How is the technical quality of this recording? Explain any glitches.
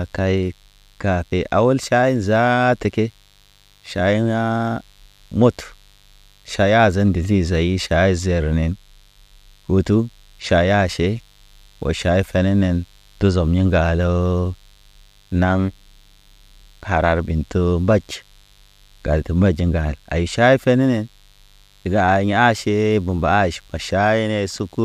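The speech is marred by one problem that runs the whole way through: mains buzz. A steady, raspy buzz sits under everything, built on 50 Hz. Something like a dimmer, a rectifier or a missing shield is letting sharp switching spikes in twice per mains cycle, so the harmonics climb well into the kilohertz range. It stays roughly 40 dB below the speech, quiet but always there.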